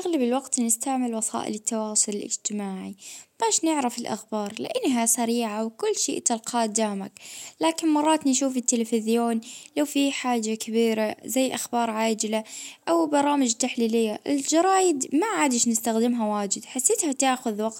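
A short recording of speech, with no technical faults to report. Nothing in the signal path calls for attention.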